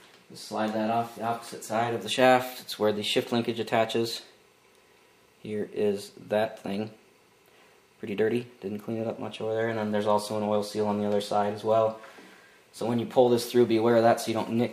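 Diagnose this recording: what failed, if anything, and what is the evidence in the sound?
Nothing failed; no fault is audible anywhere.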